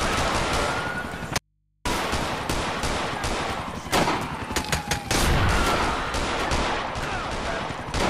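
From 1.38 s to 1.85 s the audio drops out to a faint residue for just under half a second. The sound cuts off abruptly and, instead of silence, the gap holds mains hum, roughly 45 dB below the normal level. The likely cause is that the wanted signal was lost while the path after the break stayed live, leaving an open input. The hard edges rule out a pause or fade, and the hum rules out a clean drop to silence.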